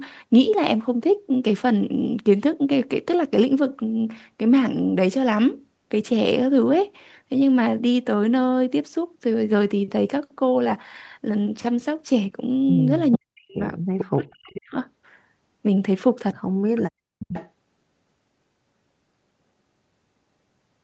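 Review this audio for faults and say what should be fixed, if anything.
Faint, delayed copies of the speech surface at 13.12–13.18 s, 13.98–14.04 s, 14.51–14.57 s and, longer, 17.19–17.5 s, trailing the original by 442 ms and sitting about 10 to 20 dB below it. This is an echo leak, likely from a loudspeaker on the far end whose echo canceller let part of the played-back signal through its microphone and back into the call. Fixing it means better echo cancellation at that end, or headphones in place of the loudspeaker.

The speech itself drops away sharply at 13.15–13.59 s and again at 14.03–14.77 s, falling very deep, on the order of 40 dB, for roughly 0.4 s and 0.7 s, overlapping the echo scraps. This is speech suppressed in double talk: with both ends active, the echo canceller likely could not tell the local talker from the returning echo and attenuated everything. Tuning its double-talk detection so it stops cutting the near-end talker while the far end speaks would prevent this.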